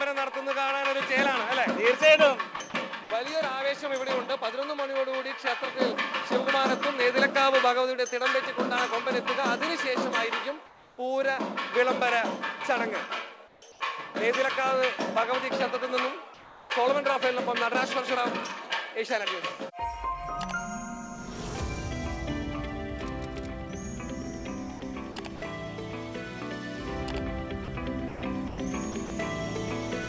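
Between 2.56 and 3.10 s the sound is chopped by the voice detector: about 100 ms of quiet edges become flat synthetic fill, likely from on-off transmission switching, showing as smooth, uniform patches on the spectrogram.

At 10.66–10.98, 13.48–13.80 and 16.34–16.70 s there is comfort noise in place of the background. The detailed background turns into steady, featureless hiss about 2–3 dB quieter, likely receiver-generated during transmission pauses. The waveform flattens to an even band, and the spectrogram shows the same smooth texture up to the 8 kHz ceiling of the call path.

Choppy detector switching returns at 24.80–25.42 s (120 ms replaced) and 27.64–29.10 s (340 ms).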